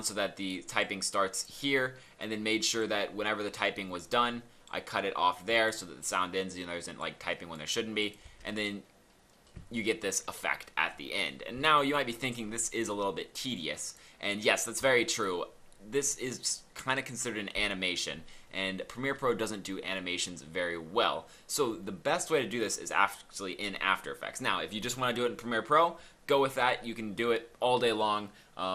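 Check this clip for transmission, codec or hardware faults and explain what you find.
Two faults are present: a codec limitation across the whole clip and a short burst of reception damage.

MP2 compression runs throughout. The sound is dull and granular with a gurgling edge, likely from MPEG Layer II coding short of bits, which fits roughly 80 kbps. Upper sub-bands switch off and flicker, so a spectrogram shows a ragged, blocky top edge.

DAB burbling occurs from 3.76 to 4.11 s. Bit errors of around a tenth of a percent slipped past error correction into 15 frames, corrupting samples so single sub-bands carry short blips of noise. It is heard as brief noise blips, with isolated band-limited blotches on a spectrogram.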